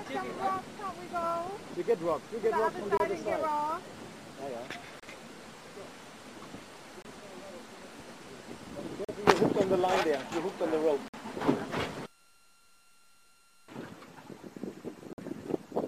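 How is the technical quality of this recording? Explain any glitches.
The recording has six gaps between stream segments: sharp-edged holes of silence at 2.97, 5.00, 7.02, 9.05, 11.08 and 15.13 s. They last from about 26 to 53 ms, with the longer ones at 9.05, 11.08 and 15.13 s. Their roughly two-second spacing matches a 2-second segment length. The time stamps of consecutive segments don't quite meet, so the player pads each join with silence. No audio is lost, but the sound is cut off abruptly at each boundary.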